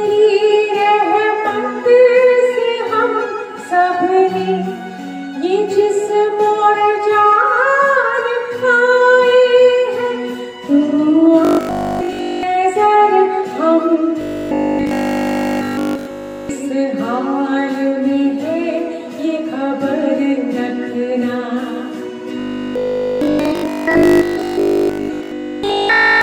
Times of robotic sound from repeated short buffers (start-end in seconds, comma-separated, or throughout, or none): 11.45-12.43, 14.21-16.49, 22.39-26.21